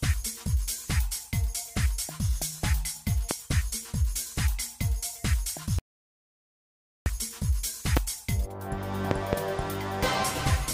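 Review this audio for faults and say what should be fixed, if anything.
Loud pops land at 3.31–3.33 s and 7.97–7.99 s, each a single sharp crack about 20 dB above the surrounding sound, and a double pop follows at 9.11–9.35 s. The likely cause is a sudden voltage step from a connector, switch, static discharge or driver glitch, which downstream circuits shape into a thump while the sound carries on beneath it. To prevent this, secure cables and connectors, avoid switching or plugging equipment during recording, and check interface drivers.

An audio dropout to silence runs from 5.79 s to 7.06 s: the sound stops abruptly, leaving about 1.27 s of dead silence with no room tone, then resumes mid-flow. The input was likely lost through a disconnected device, failed link or accidental mute while the recorder kept writing silence, so that stretch of sound is gone. To prevent this, use secure, monitored connections and watch input meters throughout the recording.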